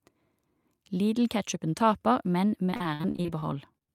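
From 2.65 s, just after "taper men", to the end, repeated packet loss sets in: data keeps going missing, and each gap, up to 54 ms, is patched by extending the previous sound. About a quarter of this stretch is filled that way, leaving the speech choppy and robotic.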